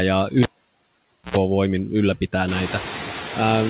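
Noise suppressor artifacts run through the whole clip. The background is pulled down by about 18 dB, so it sinks between phrases and rises under the speech, and the room noise climbs around 2.5 s.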